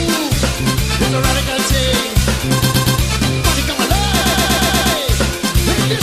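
Repeated frames at 2.63 s and 4.21 s. A 120 ms block replays three times, then six, stuttering and adding 0.36 s and 0.72 s.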